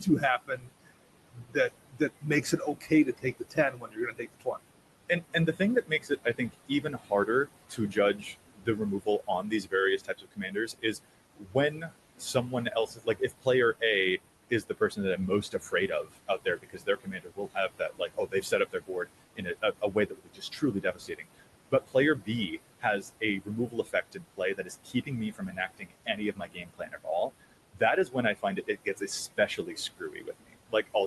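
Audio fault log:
Throughout: noise suppressor artifacts. The suppressor pulls down each band it judges to be steady noise by about 20 dB, frame by frame, so the room noise, sitting about 13 dB under the speech, sinks in the pauses and swells back beneath each phrase. A spectrogram shows a patchy, flickering noise floor with dark gaps between phrases; the waveform's floor pumps up and down.
0.00–0.92 s, 1.31–4.69 s, 5.09–13.47 s, 14.5 s to the end: speech cut by the noise suppressor. Here the suppressor mistakes parts of the speech for noise and turns them down with the background, by about 19 to 22 dB at the deepest. Soft consonants, word endings or a quiet phrase sound swallowed or faint, adding up to roughly 0.4 s in the first span, about a second and a half in the second and about three seconds in the third. Spectrograms show speech energy and tails vanishing abruptly, and the waveform shows clipped-off decays.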